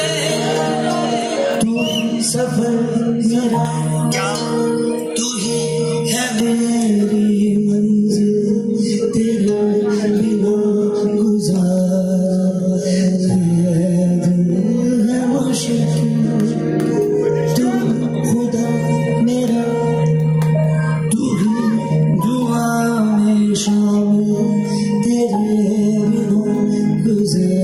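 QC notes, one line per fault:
Throughout: gain pumping. The level swings by something like 10 dB. This is likely a gain setting far too high for the microphone, with a fast limiter or compressor clamping down whenever a peak arrives and letting go in the pauses. Loud and quiet passages end up pressed close together, so the sound feels squashed and breathing.
3.65 to 6.40 s: pre-emphasis left on. In this stretch the treble jumps to about 11 dB above the 1 kHz level at 10 kHz, following a J.17-style boost curve. The high-frequency lift applied for transmission was never undone by the matching de-emphasis, so the top end stays exaggerated. The sound turns thin, bright and hissy with sharpened sibilance, then returns to its normal balance after 6.40 s.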